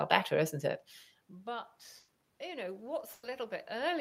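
Around 1.99 s there's a burst of packet loss running to about 2.23 s. A short run of packets never arrived in time, so the receiver stretched the last bit of sound for roughly 90 ms and let it fade out. You hear a held buzz or hiss dying away, and then the audio picks up again about 60 ms further along, with that stretch simply gone.

From about 2.39 s to the end, automatic gain rising kicks in. The level coming into the microphone dropped by about 21 dB, so the gain control starts pulling it back up, slowly. You can hear the voice and the room noise swell together over the last second and a half or so.

A second burst of packet loss lands at 3.13 to 3.26 s, in the middle of that gain climb. It has the same fill-and-fade character, about 100 ms of stretched sound, and then roughly 60 ms of audio drops out before things resume.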